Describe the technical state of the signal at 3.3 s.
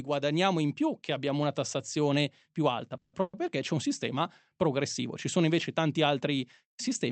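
At 3.3 s there is a burst of packet loss, running from 3.21 to 3.35 s. About 120 ms of audio never arrived. The receiver filled the gap by stretching the last sound and letting it fade. Then the speech resumes with that stretch missing.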